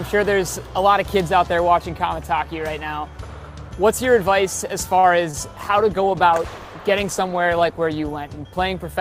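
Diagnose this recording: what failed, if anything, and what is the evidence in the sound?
Short stall from a late packet, network/jitter buffer stage: from 4.99 to 5.05 s the sound is held about 38 ms too long, and then continues where it left off with nothing lost. The buffer ran dry and the decoder stretched the last frame. A spectrogram shows frozen, smeared harmonics; the waveform shows a repeated, slightly dipped stretch.

Short concealed packet loss, network stage: at 5.31 to 5.35 s roughly 20 ms of audio never arrived and was filled with about 19 ms of extrapolated sound, heard as a brief smear or wobble. The spectrogram shows a blurred vertical slice; the waveform shows a slightly flattened segment blended at its edges.

Call bitrate drop, network-driven codec adaptation: from 5.52 s to the end the encoder falls from 64 to 15 kbps, sitting at its lowest for about 2.1 s. Coarser coding makes the sound rough and watery, with a duller top. 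The spectrogram shows the upper band thinning and a blotchier, quantised texture.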